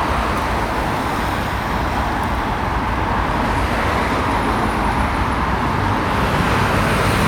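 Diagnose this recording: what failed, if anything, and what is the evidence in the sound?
No fault is audible here.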